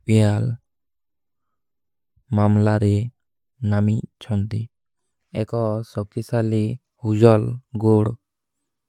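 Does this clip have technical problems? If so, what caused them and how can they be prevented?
No, no technical faults here.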